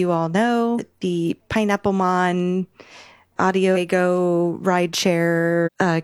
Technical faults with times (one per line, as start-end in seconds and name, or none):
0.75-0.80 damaged data in a compressed stream
3.72-3.75 damaged data in a compressed stream
5.62-5.69 damaged data in a compressed stream